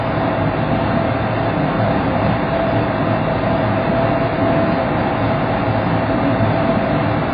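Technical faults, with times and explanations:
Throughout: AAC compression. Nothing is present above 5 kHz, so the audio sounds dull and boxed in, and the heavy damage leaves it smeared, with a warbling, fizzy texture in sustained and noisy parts. The likely cause is AAC-LC encoding at a very low bitrate, consistent with roughly 16 kbps. The encoder drops the top band entirely and quantises the remaining frequency lines so coarsely that whole regions are emptied or patched with substitute noise.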